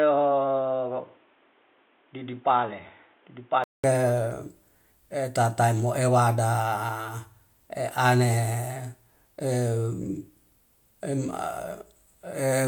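From the start to 3.84 s the speech sounds dull and boxy, with nothing above 3.8 kHz, a little quieter, and over its own faint background noise. A 200 ms gap then precedes fuller sound, likely from the input switching away from a poorer device.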